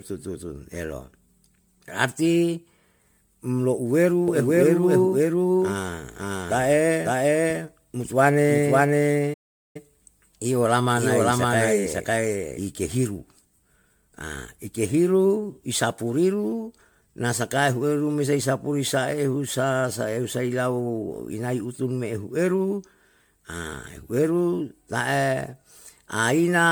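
Speech that sounds swirly, smeared and hollow from start to finish, with blurred attacks, more degraded than a single encode would leave it. This is generation loss, likely from re-encoding around fifteen times with MP3, in a way that fits 128 kbit/s, each pass adding fresh quantisation noise and spectral holes on a shifted frame grid. From 4.28 s to 12.59 s a second full-band copy of the sound trails the first by about half a second at much the same level, dry and without room colour, and it cuts in and out abruptly. This doubled audio track is likely caused by a slower capture path or an edit holding two out-of-step copies. At 9.33 s the sound stops dead mid-flow for about 0.41 s before carrying on at 9.76 s, a playback stall, likely the player running out of data or its thread being blocked until it recovered.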